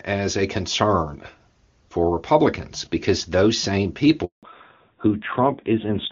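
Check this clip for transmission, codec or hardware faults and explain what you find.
Two faults appear late in the speech, a dropout and then a loss of bandwidth.

Handover gap, 4.25 to 4.43 s: right after "because those same", the call switches networks and no speech frames arrive for 180 ms. The voice dies away and stays silent until the new link carries audio again, and whatever was said in that span is lost.

Fallback to narrowband, 4.43 s to the end: the call drops from HD Voice to an older narrowband codec, so nothing above 4 kHz passes. The voice, clear and wideband before the gap, turns duller and rougher, which fits a move from AMR-WB at 23.85 kbit/s down to AMR-NB at 5.9 kbit/s.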